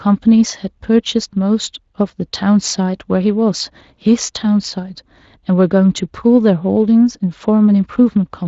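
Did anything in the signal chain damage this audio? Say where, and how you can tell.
No, nothing in the chain has damaged this speech; it comes through a Speex codec at a fairly generous setting, which only lightly colours the sound and leaves nothing above about 7.6 kHz, just as you'd expect from that path.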